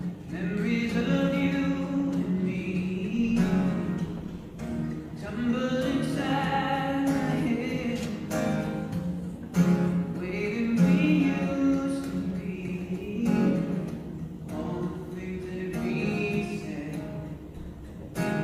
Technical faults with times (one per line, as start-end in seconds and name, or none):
none